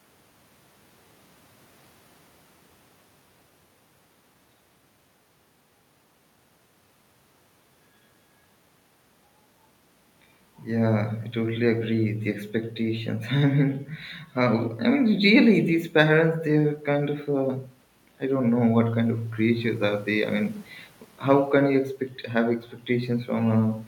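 No technical faults can be heard in the recording. The background noise belongs to the room itself, and the change in level around 9.5 s is the talker shifting position relative to the microphone.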